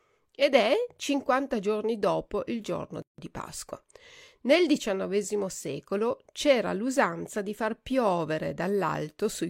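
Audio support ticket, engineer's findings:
Gap at a join of encoded pieces, 3.02–3.18 s, after "giorni dopo il giorno": about 160 ms silence, separately encoded segments joined untrimmed. Waveform shows flat dropout, abrupt slightly smeared edges; spectrogram a blank vertical band.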